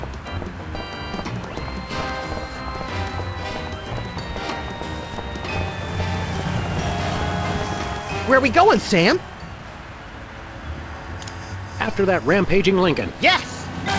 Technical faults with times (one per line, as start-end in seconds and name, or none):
none